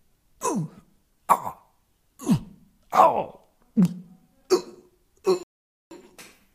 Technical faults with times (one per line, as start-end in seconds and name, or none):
5.43-5.91 rebuffering stall